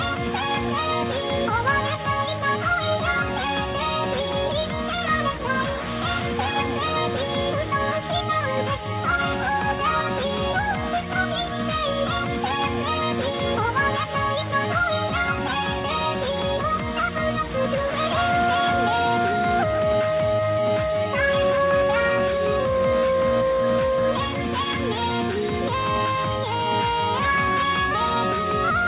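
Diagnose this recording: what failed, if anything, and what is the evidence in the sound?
Nothing failed in this recording.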